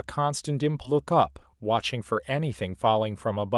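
At 0.85 to 0.95 s the speech has a skip ahead. Roughly 0.4 s of audio was dropped while later audio already waited. Playback jumps forward, and the two sides are joined almost directly. Part of the speech is simply missing, with no filler.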